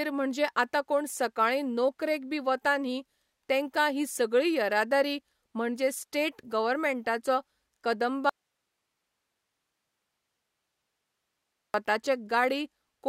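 A speech clip with an audio dropout to a faint residue from 8.29 to 11.74 s. The signal cuts out abruptly for about 3.4 s. Only hiss remains, roughly 55 dB down. The downstream path likely stayed live while the source link broke.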